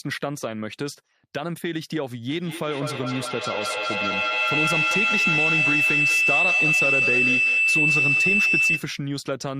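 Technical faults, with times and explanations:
2.28 to 9.0 s, feedback howl: a loop from microphone to loudspeaker and back adds level on each pass, so the repeats grow rather than decay and narrow onto the frequency the loop favours, here around 3 kHz, with the repeats coming about every fifth of a second. It peaks about 6 dB above the speech. A spectrogram shows a bright horizontal line near 3 kHz thickening over time, and the waveform's envelope swells until 9.0 s.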